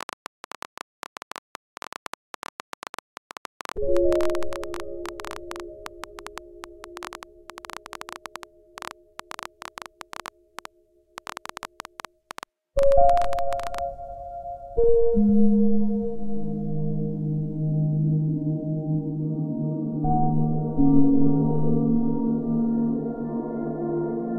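Right from the start, at 0.01 s, there's a train of clicks running until about 13.8 s: roughly a hundred and fifty similar-shaped pulses, averaging 11.5 a second but spaced unevenly, so the ticking sounds ragged. They poke out around 10 dB above the sound and carry straight through the pauses. The likely cause is something injecting pulses from outside, like interference from nearby equipment or a faulty connection or power supply.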